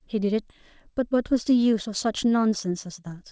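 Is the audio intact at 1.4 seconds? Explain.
No. A jitter buffer speed-up runs from 0.60 to 3.25 s: pitch-period slices are cut to shed excess buffering, so speech plays about 8% faster, hurried but at unchanged pitch.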